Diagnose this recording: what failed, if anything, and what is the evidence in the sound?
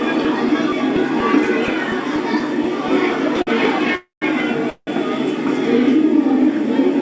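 A short stall from a late packet, at the network and jitter-buffer stage, appears at 3.42 to 3.49 s. One packet missed its playout time, so the receiver held the last sound for 50 ms until the packet arrived and then continued from the same point. Nothing is lost, but everything after it runs 50 ms later. On a spectrogram the final spectral slice smears horizontally into a flat band. The waveform shows a short repeating cycle instead of a gap.

Two call audio freezes follow, at 3.95 to 4.24 s and 4.70 to 4.89 s. The likely cause is packets held up in the network, draining the jitter buffer. The receiver filled 265 ms and then 173 ms. Each fill starts as a fading buzz of the last sound and goes fully quiet for the final 140 ms and 80 ms. On a spectrogram, frozen bands fade into a dark column before the content resumes. The waveform shows decaying repetition, then flat silence, with no content lost. 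All of this sits within the call path's 8 kHz upper edge, which fits G.722 at 64 kbps.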